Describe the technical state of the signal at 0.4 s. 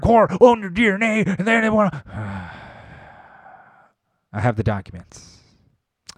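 At 0.41 s there is a small jump forward in the speech, just before "own your". No silence separates the two sides. The likely cause is a dropped buffer (overrun), where around 10 ms of samples were overwritten before being read.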